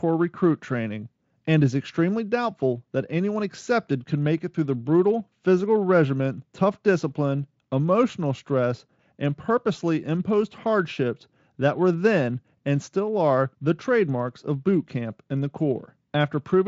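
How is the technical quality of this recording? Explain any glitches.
The recording has no glitches or technical faults to explain. It has passed through the Speex speech codec at a high-quality setting, around 34 kbps, and any coding trace from it is faint at most.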